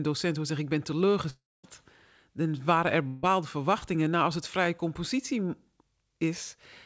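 Speech heard over a call path, with nothing above 8 kHz, which fits a wideband codec such as G.722. At 1.30 to 1.65 s there is a gap of about a third of a second. The last sound carries on as a fading buzz or hiss, then about 0.23 s of silence follows. At 3.07 to 3.25 s a gap of about 0.16 s is bridged entirely by that fading continuation. Both are likely a long network dropout, with that audio never arriving. At 3.79 to 3.83 s a brief smear replaces about 20 ms of sound. That is short concealed packet loss: the receiver patched the hole from the preceding sound and blended back in.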